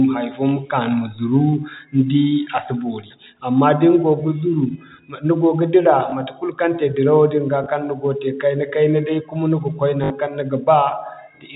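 Around 6.10–6.12 s and 7.64–7.66 s there's packet loss with the last packet repeated, each a small blip. At 10.04–10.10 s a longer 60 ms run, likely three 20 ms packets, gives a brief robotic stutter over the G.711 telephone band.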